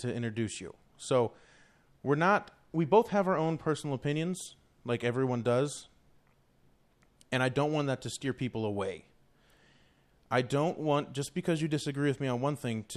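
At 8.22 to 8.26 s, between "don't want that to" and "people away", the speech is briefly overlaid by DAB burbling, a short burst of noise blips. Bit errors from weak reception slipped past the error correction into the MP2 audio data, so corrupted samples put short blips of noise into individual sub-bands for a moment. The bit error rate was roughly 0.2 percent.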